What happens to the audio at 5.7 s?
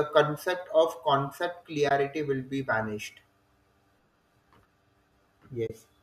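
AAC frame loss with muting occurs from 5.67 to 5.70 s, a gap of about 30 ms, which fits three lost frames from what is likely a low-delay AAC stream. The decoder fills the missing frames with a zeroed spectrum, and the overlapping transform windows on either side taper the sound down into the gap and back up out of it. The result is a brief, soft-edged dropout.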